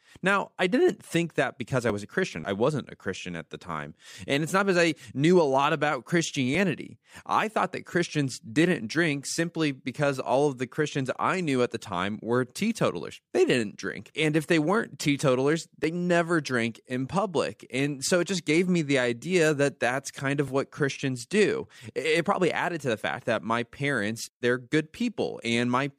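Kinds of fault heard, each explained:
Clock drift buffer slips: A click recurs through the speech every 4.64 s. Likely two mismatched clocks, periodically dropping or repeating a small sample block.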